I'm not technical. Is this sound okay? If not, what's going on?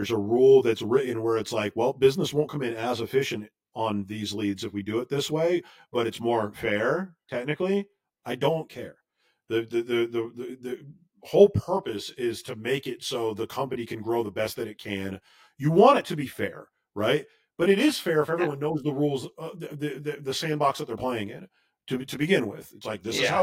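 No. Throughout the speech there is channel delay (comb filtering): one side arrives roughly 20 milliseconds late, and mixing both sides cancels a regular series of pitches, starting around 30 Hz. The result sounds rough or slightly doubled rather than like an echo, because the delay is too short to hear as a separate repeat.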